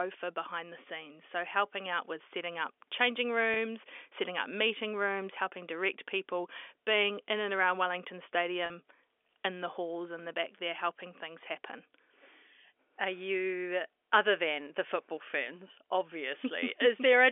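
At 3.54 to 3.56 s, between "with setting up changing" and "setting up meeting rooms", and again at 8.66 to 8.70 s, packet loss with pitch repetition bridges 20 ms and 40 ms gaps by replaying the last pitch period. Each gap sounds like a brief held buzz in the G.711 telephone-band audio.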